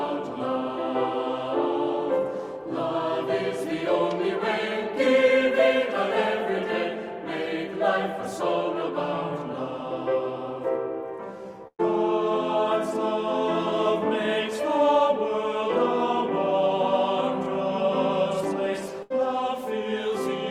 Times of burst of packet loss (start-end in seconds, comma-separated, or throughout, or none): 11.67-11.81, 19.03-19.12